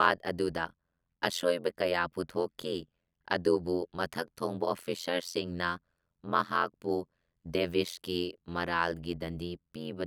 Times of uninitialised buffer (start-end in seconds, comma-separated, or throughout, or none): none